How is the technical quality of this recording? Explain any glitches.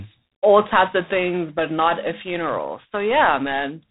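The quality is limited by plainly audible codec damage throughout. G.726 ADPCM coding runs for the whole clip: each sample is sent as a coarse few-bit difference from an adaptive prediction, leaving a harsh, rasping hiss that rises and falls with the speech level, consistent with 24 kbit/s operation. Nothing above 3.8 kHz is present.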